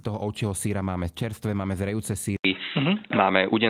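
At 2.37 s, just after "máme čerstvé máme zrejúce", the recording likely switched its input to a poorer device. After an 80 ms silence, the speech turns dull and boxy, with nothing above 3.9 kHz, a small level shift and a faint new noise floor.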